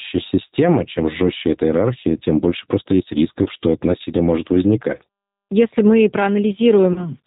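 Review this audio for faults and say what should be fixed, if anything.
Throughout the speech, G.729 codec damage is plainly audible. Nothing above 4 kHz survives, and the voice has a slightly rough, synthetic texture because it is rebuilt from a vocal-tract filter, a pitch predictor and a few pulses per frame. The sound fits G.729A at 8 kbit/s. On a spectrogram, energy stops sharply at 4 kHz, and harmonics look smeared and grainy. To prevent this, negotiate a wideband codec such as G.722 or Opus.

VoIP packet loss concealed by the speech codec occurs at 3.43–3.48 s, between "тем больше просто есть" and "что это насилие может", and again at 6.93–7.09 s. Each gap fits about 30 ms of lost audio, consistent with a single packet. The decoder extended its last pitch and filter while lowering the gain, so the sound stretches into a fading buzzy tone or coloured noise. Recovery lags because each frame builds on the one before. 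On a waveform, the amplitude shrinks smoothly. On a spectrogram, the harmonics turn flat and steady, then thin out. To prevent this, fix network loss, add jitter buffering and enable FEC or redundancy.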